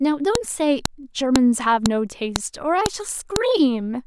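File header played as audio, at 0.35, 0.85, 1.36, 1.86, 2.36, 2.86 and 3.36 s: the speech arrives as 0.5 s pieces joined with each WAV header left in, so those header bytes play as samples. Each boundary gives a sharp, loud click that ignores the surrounding speech.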